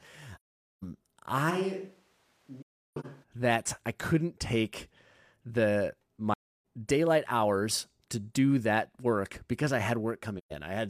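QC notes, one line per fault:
0.35–0.83 s, 2.62–3.06 s, 6.33–6.64 s and 10.38–10.52 s: AAC frame loss with muting. The sound fades into silence and back with soft edges. Whole coded frames went missing and the decoder zeroed them. The overlapping windows smooth each gap's edges. The holes last about 0.48, 0.31 and 0.13 s. The second is broken up over 0.43 s, with its longest hole near 0.3 s. The lengths fit frames of roughly 43 ms.
1.52–3.22 s: switch to a distant microphone. The speech turns roomy and hollow at once, with thinner bass. The level drops about 5 dB. Background noise comes up to roughly 35 dB below the speech. The change is abrupt at both ends. The likely cause is the close microphone dropping out, leaving a camera or room microphone that hears more of the space. The second muted gap falls inside this stretch.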